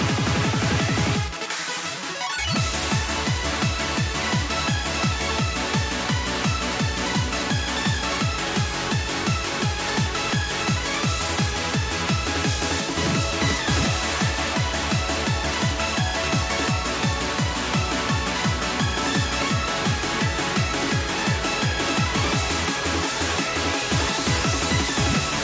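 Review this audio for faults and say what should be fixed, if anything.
Nothing in this audio needs to be fixed; there are no faults to report.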